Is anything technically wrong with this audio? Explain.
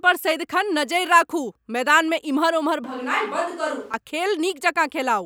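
Yes. From 2.84 to 3.94 s the speech abruptly turns roomy, hollow and bass-light, roughly 5 dB quieter, then snaps back. This is likely a switch to a distant microphone.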